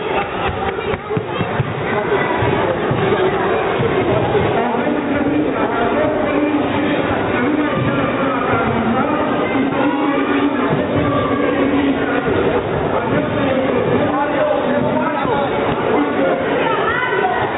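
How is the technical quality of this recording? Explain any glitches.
The technical quality holds up, with no glitches to explain, and the audio carries the narrowband character of a telephone-grade call path, with nothing above 4 kHz.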